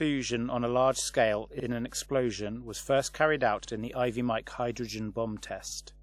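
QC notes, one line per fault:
throughout: mains hum. Power-line current is leaking into the signal path, most plausibly through a ground loop or stray coupling from a nearby transformer, and riding under the speech as a steady 50 Hz tone with a few low harmonics. It sits about 25 dB below the speech and adds a dull, constant buzz beneath the voiced passages.
throughout: low-bitrate audio saved at a high bitrate. The file has been re-encoded as MP3 at a generous bitrate, but the content above 16.6 kHz has been cut away completely. The likely cause is an earlier low-bitrate encode, the kind that fits a 64 kbit/s WMA source, whose losses the second pass could only preserve. The high bitrate restores nothing, so the speech keeps a dulled top end and the smeared detail of the first codec.
1.60 to 1.65 s and 5.70 to 5.75 s: overlapping chunks. The audio was processed in 2 s chunks, and at these joins each new chunk began 50 ms before the previous one ended. 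That 50 ms stretch is therefore played twice. It is heard as a short stutter with a click at the seam, where the repeated piece jumps back against the signal that came before it.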